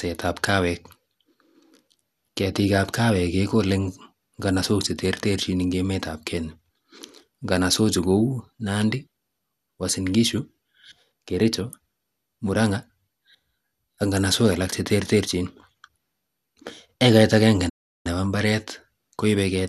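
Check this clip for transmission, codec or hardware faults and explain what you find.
Two faults are audible: a codec-related dullness and granularity across the whole clip, and a short dropout near the end.

Throughout the speech the sound is dull and carries a plainly audible gurgling, granular texture, with no content above about 12.2 kHz. This is likely MP2 compression at a low bitrate, consistent with roughly 80 kbps. MPEG Layer II divides the signal into 32 sub-bands and allocates bits to each. Starved of bits, it shuts off the upper bands entirely and coarsely quantises the rest, giving the muffled, bubbling character familiar from low-rate digital radio.

From 17.69 s to 18.07 s the audio cuts to silence for about 0.36 s in mid-flow, then resumes. This is a playback stall, likely caused by the player running out of buffered data or its audio thread being blocked, so the output went silent until it could continue. 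It is heard as an abrupt gap interrupting the speech.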